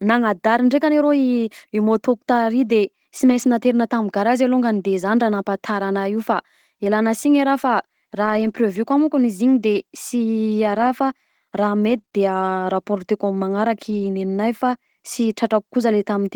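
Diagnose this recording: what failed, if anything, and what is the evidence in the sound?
At the network stage, packets were lost between about 3.17 and 3.47 s, and the decoder recovered them as lost packets rebuilt from error correction, using the low-bitrate copies carried in the packets that followed. No gap opens, but about 160 ms of speech comes out rougher and noisier, which fits around eight separate 20 ms packets.

Also at the network stage, scattered short gaps occur between 8.25 and 14.05 s, where a few packets, roughly three, were lost or arrived late. The receiver filled each hole by extending the preceding sound. The result is brief ticks or smears, each no longer than about 20 ms, with roughly 60 ms missing in total.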